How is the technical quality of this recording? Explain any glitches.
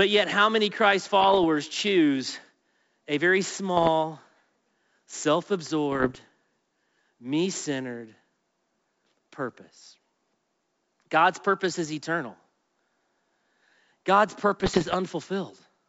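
The trouble here is bit errors on an ADPCM link, in four short bursts of pops and rough crackle: 1.21 to 1.45 s, 3.77 to 3.89 s just after "a very", 5.92 to 6.19 s, and 14.60 to 14.95 s. Each flipped bit throws off the decoder's step size and prediction, so the damage rings on for a few milliseconds as grit and brief level jumps. Underneath, the G.722 wideband coding comes through clean.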